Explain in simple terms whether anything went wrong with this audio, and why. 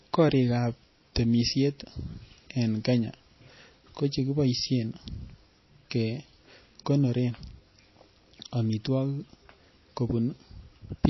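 Something goes wrong across the whole clip. The speech sounds watery and swirly, and nothing is heard above 5.8 kHz. The likely cause is heavy MP3 compression. Short of space, the encoder cut the treble and dropped faint detail.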